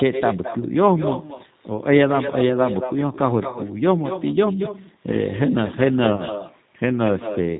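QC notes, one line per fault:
throughout, echo with no canceller: A quieter, thinner copy trails everything, about 9 dB down and around a fifth of a second late. The far loudspeaker's sound returns uncancelled.
throughout, G.729 codec: The sound is plainly rough and synthetic, with nothing above 4 kHz. Everything is rebuilt from a filter, pitch predictor and sparse pulses, consistent with 8 kbit/s.
6.15–6.23 s, VoIP packet loss concealed by the speech codec: About 30 ms are lost, which fits a single packet. The decoder extrapolates from its last pitch and filter with fading gain, and the sound stays weak until 6.23 s.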